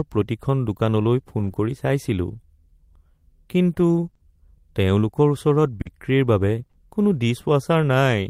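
Just after "প্ৰতিখন দোকানলৈ", from 1.39 to 1.49 s, a lost packet was rebuilt from error correction: about 60 ms sounds rougher and noisier, probably three packets replaced by low-bitrate copies, with a hazier spectrogram. At 1.51 to 1.55 s, a short concealed packet loss fills a 20 ms hole by extending the preceding sound, heard as a brief smear, with a flattened waveform stretch and no real onset. From 4.05 to 4.21 s, and again from 5.81 to 6.75 s, repeated packet loss (robotic sound) patches 60 ms, then 100 ms, in gaps up to 40 ms long. It sounds choppy, with repeated smeared blocks and broken harmonics on the spectrogram.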